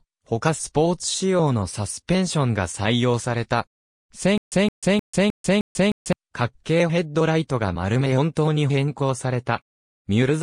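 From 4.38 to 6.13 s, a stutter with silent gaps: one 167 ms fragment repeats five times, each followed by 141 ms of dead silence, likely a stalled stream. Unlike a plain dropout, the same fragment keeps returning.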